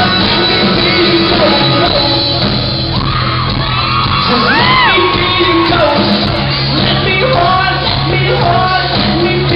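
From 5.65 to 6.38 s, a nearby 2G phone in its signalling state radiates short groups of radio bursts, and the audio circuitry rectifies that RF energy into the signal path. These GSM signalling bursts come through as a galloping dit-dit-dit of brief buzzes repeating at about 217 Hz, sitting roughly 20 dB below the programme sound and lasting under a second before the interference stops.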